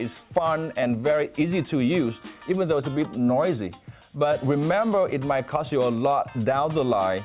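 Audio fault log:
No technical problem can be heard anywhere in the signal.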